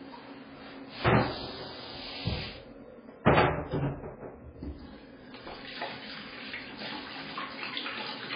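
Throughout, a starved encoder, likely heavy MP3 compression at a bitrate consistent with about 16 kbps, has discarded the treble and zeroed weak frequency lines. Nothing survives above 5 kHz, leaving the sound dull and watery, with swirling, flickering texture and smeared attacks.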